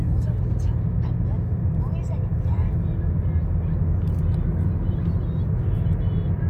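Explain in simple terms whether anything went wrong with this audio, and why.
Nothing went wrong with this audio, because no fault can be heard anywhere in it.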